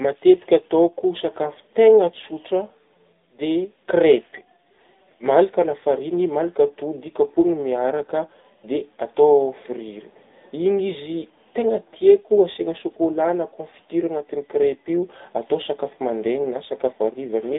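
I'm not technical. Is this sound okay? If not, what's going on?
No. The whole clip has the AMR narrowband mobile codec sound of an old phone call. Nothing above about 3.8 kHz gets through, so the voice sounds thin and muffled. The codec rebuilds speech from a rough model, which leaves it clearly buzzy and synthetic.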